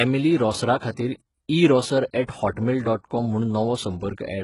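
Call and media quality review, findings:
Treble throughout is synthetic, with s sounds gritty and metallic and nothing above 11.1 kHz. Likely HE-AAC compression, with spectral band replication copying lower bands upward, heavy damage pointing to roughly 12 kbps. Differs from plain low-pass: treble present, just wrong.

Short hiss just ahead of an attack at 2.27 s, spread over about 18 ms, attack softened. Pre-echo from the transform codec: block-wide quantisation noise leaking into the quiet gap before the onset. Distinct from a click or dropout: noise precedes, not replaces, the attack.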